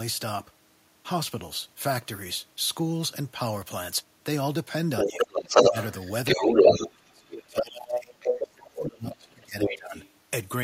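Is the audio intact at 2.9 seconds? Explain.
Yes, the speech at 2.9 seconds is intact, with no dropout, click, distortion or other fault at that moment.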